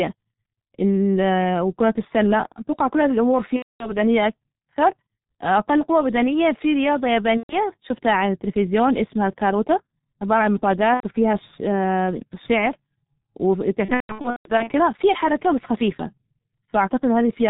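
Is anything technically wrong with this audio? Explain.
Yes, two problems. The whole clip of speech runs through the G.723.1 codec at 6.3 kbit/s, and it's heavily damaged by it. This old telephony codec works in 30 ms frames, throws away everything above 4 kHz, and tracks the voice model slowly. So the speech comes out muffled and hoarse, and the consonants smear together because the codec can't follow quick changes.

On top of that there's VoIP packet loss concealed by the speech codec, four times. The first is at 3.56 to 3.93 s, right after "أتوقع كل هذى الأمور", with about 240 ms missing. The second is at 7.37 to 7.56 s, between "قوى بدنية في رياضة" and "شفتها على التلفزيون اسمها", with 120 ms gone. The third is at 10.94 to 11.04 s, about 90 ms. The last and worst is at 13.85 to 14.70 s, just before "في حركة بس خفيفة". There, 480 ms is lost in patches spread over roughly 810 ms, and the longest single gap is 150 ms. 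In each gap the decoder keeps repeating the last pitch and filter it had and turns the level down frame by frame. You hear the speech stretched into a fading buzzy tone or tinted noise, and it stays weak and a bit warped for a moment after the audio resumes.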